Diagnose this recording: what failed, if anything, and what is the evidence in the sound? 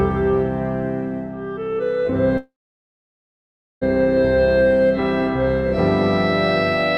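A call audio freeze at the network stage, with the jitter buffer running dry, is the likely cause. At 2.37 s the music stops moving forward: the last sound is briefly held as a fading fill, then about 1.32 s of silence follows, until the music resumes at 3.83 s. It picks up exactly where it broke off, so nothing is lost, but the 1.44 s gap pushes everything after it later by the same amount.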